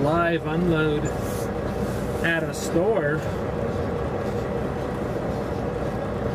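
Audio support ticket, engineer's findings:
No audible faults found; nothing to escalate.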